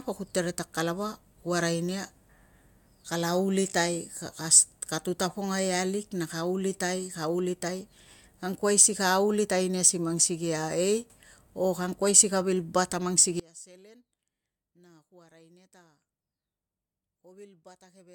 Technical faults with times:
13.40-18.14 one channel inverted

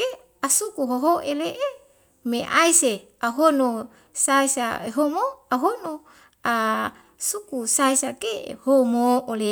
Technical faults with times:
none

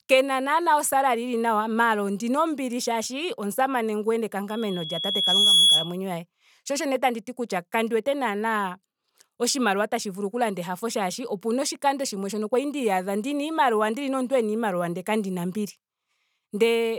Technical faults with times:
4.49-5.97 loudspeaker feedback squeal

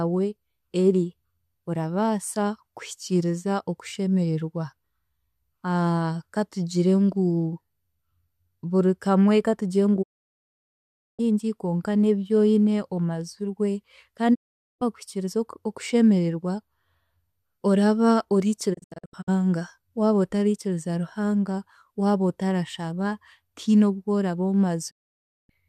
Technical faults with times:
10.01-11.21 digital broadcast dropout
14.33-14.83 digital broadcast dropout
18.73-19.29 digital broadcast dropout
24.89-25.51 digital broadcast dropout

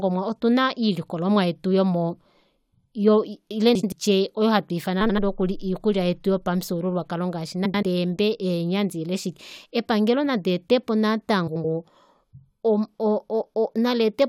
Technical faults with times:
3.75-3.93 frames out of order
5.00-5.19 frames out of order
7.65-7.83 frames out of order
11.47-11.65 frames out of order

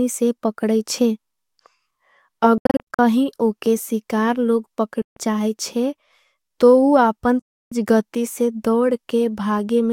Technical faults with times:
2.58-2.99 Bluetooth dropout
5.02-5.17 Bluetooth dropout
7.39-7.72 Bluetooth dropout

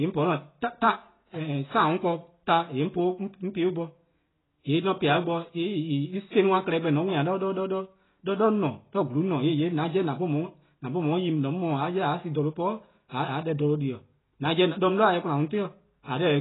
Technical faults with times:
0.00-16.40 AAC compression

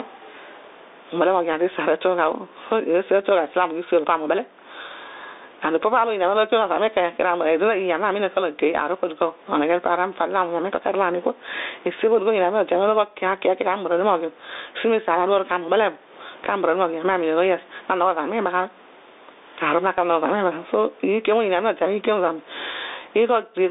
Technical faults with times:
0.00-23.71 gain pumping
0.00-23.71 Bluetooth CVSD headset codec

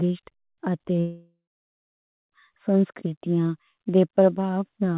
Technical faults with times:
1.00-2.33 long network dropout

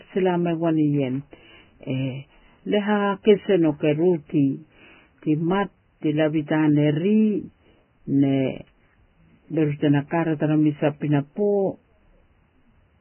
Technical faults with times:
0.00-13.01 Vorbis compression

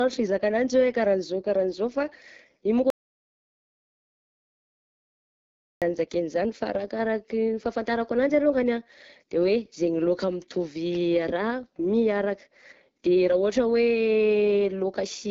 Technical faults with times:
0.00-15.30 AMR wideband (HD Voice) codec
2.90-5.82 audio dropout to silence

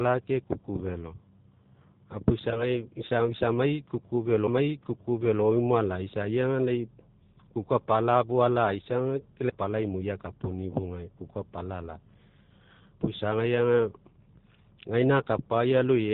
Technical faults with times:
0.00-16.13 G.729 codec
2.51-2.68 VoIP packet loss concealed by the speech codec

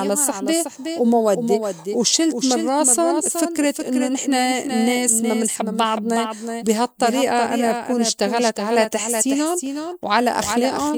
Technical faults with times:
0.00-10.98 doubled audio track

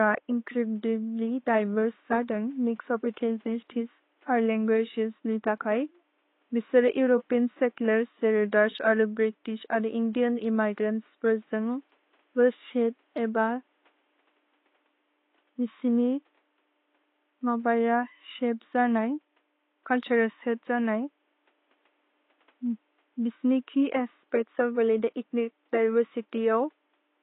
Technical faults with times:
0.00-27.23 AAC compression

